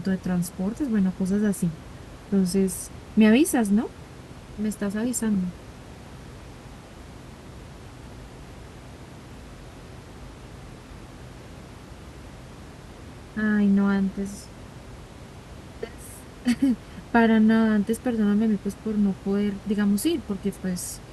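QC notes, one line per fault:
No faults found in this speech recording.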